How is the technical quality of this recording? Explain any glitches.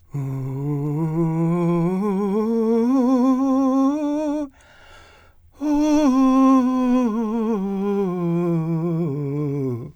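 The music comes through with no audible technical faults: no dropouts, clicks, distortion or timing disturbances anywhere in the recording.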